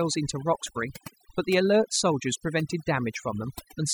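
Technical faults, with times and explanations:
Throughout: overdone noise removal. The noise reduction is set far too strong, so every frequency band near its noise estimate is pushed down or shut off, taking quiet parts of the speech with it. The background drops and breaks up into twinkling specks.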